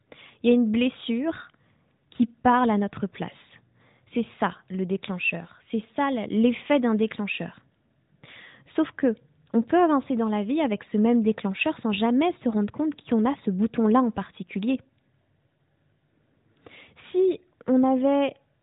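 No technical faults are audible anywhere in this speech clip.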